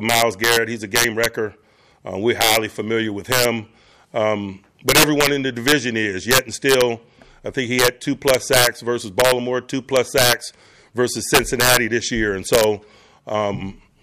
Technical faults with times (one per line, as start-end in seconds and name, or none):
0.00-14.03 integer overflow